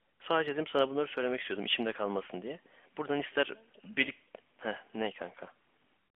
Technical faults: none

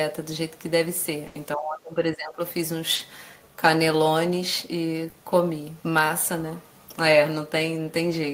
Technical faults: burst of packet loss; speech suppressed in double talk; short concealed packet loss

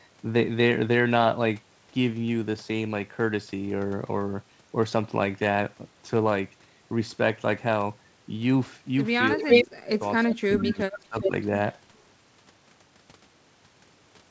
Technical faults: speech suppressed in double talk; echo leak

